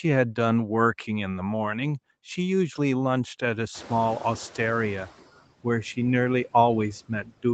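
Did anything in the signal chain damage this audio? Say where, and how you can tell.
Yes. In the call processing stage, the noise suppressor causes noise suppressor artifacts throughout, cutting background by about 15 dB. The residue pumps between phrases, unlike steady codec coding noise.

Noise suppressor catching up happens from 3.74 to 5.22 s. The room noise jumps about 25 dB near 3.5 s, then sinks over 1.48 s to about 12 dB lower. A gain change would move the speech too.

Speech cut by the noise suppressor occurs between 7.08 and 7.44 s. Roughly 100 ms of soft sound drops as much as about 13 dB and sounds swallowed, without the silent gap or click of a network dropout.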